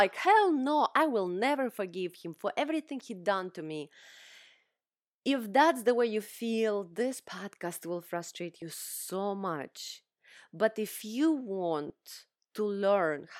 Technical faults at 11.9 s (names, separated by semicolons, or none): lost LE Audio frames